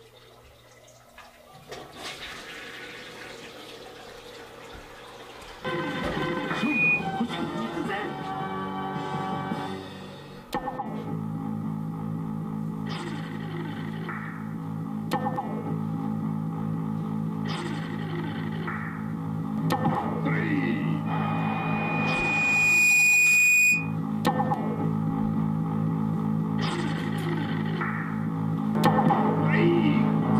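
A single piercing tone near 2.5 kHz swells over about two seconds from 21.06 s, ending at 23.96 s roughly 10 dB above the rest of the sound. This is loudspeaker feedback squeal: a microphone re-captured its own loudspeaker, and loop gain above one at that frequency let it grow unchecked.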